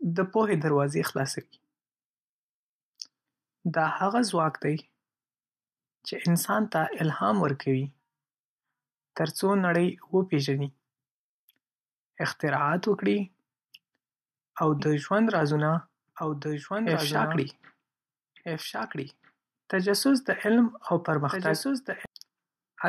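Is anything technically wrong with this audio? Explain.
Yes. From 14.8 s to 22.1 s there is a doubled audio track. The speech is likely being captured a second time through a slower path, so a full-band copy, a few decibels quieter, trails the original by about a second and a half, with no decay, and starts and stops abruptly.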